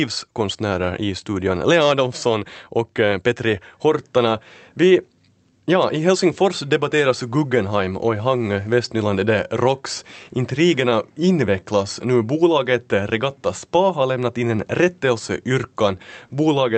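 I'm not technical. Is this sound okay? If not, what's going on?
No. The talker's side and the listener's side of this call are keeping time at slightly different speeds, a fault called clock drift between sender and receiver. Here the sending side runs about 3% slow, so the receiving end keeps running short of fresh sound to play. The speech reaches you a little late and a little stretched for the whole clip, rather than at one bad moment.

To cope, the receiver makes repeated timing corrections from 0.22 s to 16.62 s, quietly repeating tiny slivers of sound to fill the gaps. Together these add roughly half a second, so the speech plays at about 97% of its proper pace. Each fix is small and unevenly spaced, so you may notice slight hiccups or a faintly uneven rhythm instead of clear dropouts. The call's sound, which stops at about 8 kHz, is not the problem.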